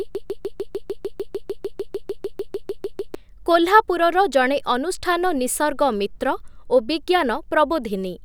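From the very start of this speech clip until 3.15 s, a broken-record loop is already under way: a 0.15 s fragment repeats exactly, about 20 times in a row, back to back. A stall likely froze playback on that fragment. The waveform and spectrogram show identical blocks tiling every 0.15 s.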